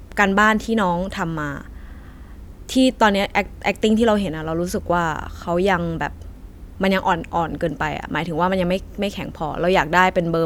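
Nothing goes wrong anywhere in this speech recording, so there's no technical fault to walk through.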